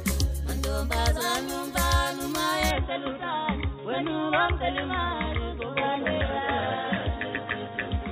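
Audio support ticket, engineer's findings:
Sound turns dull and boxy at 2.71 s, no gap, through to end; nothing above 3.8 kHz, level roughly unchanged, faint new background noise. Likely input switched to a poorer device, narrower-band mic path with its own tone and noise floor.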